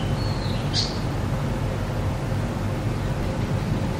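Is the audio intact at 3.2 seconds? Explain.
No. At 3.23 s there is damaged data in a compressed stream: corrupted bytes make the decoder misread or reject a frame, lose sync and hunt for the next frame header, leaving a brief chirp, squawk, click or short hole in the sound.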